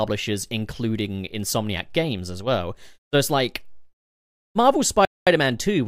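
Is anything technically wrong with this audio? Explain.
Yes. A Bluetooth stall at 5.05 to 5.27 s cuts the speech to silence for about 0.22 s. This is likely interference holding up packets, so the headphones' buffer emptied and playback waited for resends, resuming either where it stopped or slightly further on.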